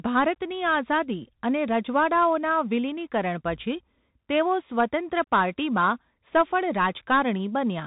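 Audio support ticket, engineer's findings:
Bluetooth CVSD headset codec on the speech, whole clip. Top end gone above 4 kHz, s sounds scratchy, granular hiss sitting under everything, loud bright bits smearing and distorting. Probable component: headset link running the narrowband CVSD path, which fits a 64 kbps stream. Mechanism: one-bit up/down delta coding with an adaptive step, so fast high-energy swings outrun the step and the quantising shows up as that grainy noise. Damage plainly audible.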